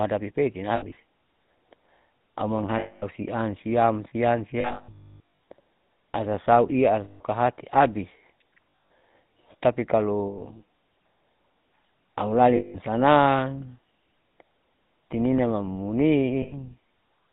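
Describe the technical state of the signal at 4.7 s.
At 4.7 s the signal sits inside a burst of lost GSM frames running from 4.60 to 5.20 s. Within that stretch about 640 ms of frames went missing, scattered over 800 ms, the longest unbroken gap around 300 ms. The decoder covers each gap by repeating the last good frame's settings, so the sound freezes into a rough, metallic ring.

Underneath, the whole passage has gone through the GSM full-rate codec at 13 kbps. It rebuilds the sound from a vocal-tract model driven by a sparse, regularly spaced pulse excitation and cuts everything above 4 kHz. The result here is a plainly audible buzzy, gravelly roughness with a dull, band-limited top.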